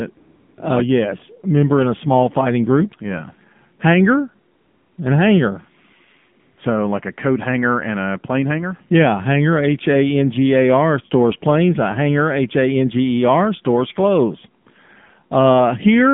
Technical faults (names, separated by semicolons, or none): AMR narrowband mobile codec; AMR comfort noise